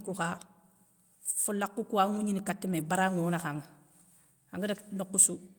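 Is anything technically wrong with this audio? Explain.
Yes, there are two faults in this speech clip.

Lost packet rebuilt from error correction, 2.71 to 2.85 s: the decoder filled about 80 ms with the lower-bitrate backup copy that Opus carries in the following packets, which fits four 20 ms packets. Nothing drops out, but that stretch sounds rougher and noisier.

Chunks out of order, 4.22 to 4.25 s: one chunk of about 10.7 ms plays one position late, after the chunk meant to follow it. The misplaced audio creates three hard joins, heard as a brief jumbled moment.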